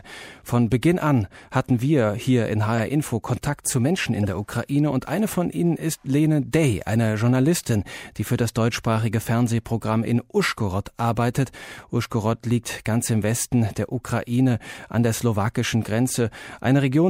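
At 2.78 to 2.80 s there's a short, fairly loud glitch: a corrupt frame decoded. A single compressed frame picked up flipped bits, and the decoder played it anyway, so misread gains and codes threw energy into the wrong frequencies for about 20 ms. A second one hits at 4.23 to 4.25 s, a little quieter, again lasting roughly one frame before the speech carries on.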